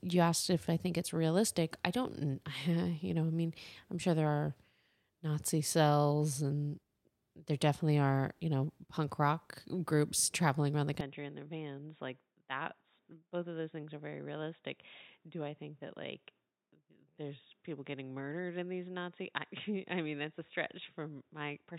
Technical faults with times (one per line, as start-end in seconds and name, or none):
11.01-21.79 input switched to a poorer device